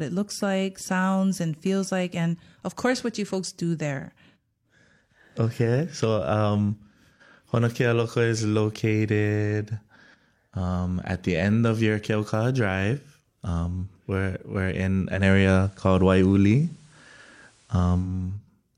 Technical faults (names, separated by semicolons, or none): digital radio blending to analogue